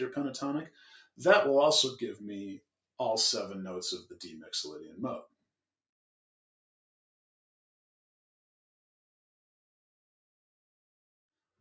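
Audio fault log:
Throughout: noise suppressor applied to music or sounds. A speech-oriented noise suppressor in the path stays engaged on material it wasn't built for, treating sustained tones, ambience and reverberant decay as background noise to be removed. Its gain keeps moving by around 5 dB as it decides what to keep, so onsets pass while held portions and tails are pulled down. That uneven gain produces pumping, flutter or thinning. The call microphone processing passes nothing above 8 kHz.
0.7 to 1.19 s: sound cut by the noise suppressor. In this stretch the suppressor classifies the sound itself as noise and attenuates it beyond the level applied elsewhere, with the deepest drop reaching about 14 dB. Roughly a third of a second within the window is affected. Sustained or decaying parts sink in level or have their decay truncated, while abrupt transients largely get through.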